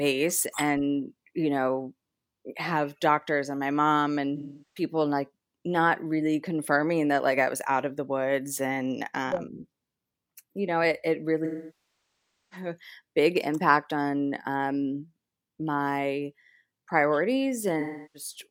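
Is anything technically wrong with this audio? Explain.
Yes, the speech has AAC frame loss with concealment at 4.36–4.81 s, 11.44–12.66 s and 17.80–18.35 s. The decoder rebuilt missing frames from the last good spectrum, so the shorter gaps sound smeared and phasey. The long middle one decays toward silence before fading back. On a spectrogram these show as flat, smeared bands; the waveform's envelope dips.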